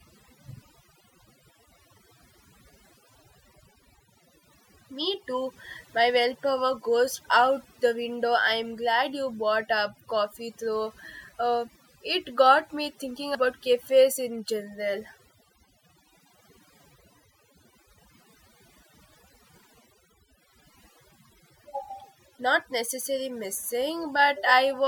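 It's a speech recording with overdone noise removal throughout: the background drops and breaks up into twinkly specks.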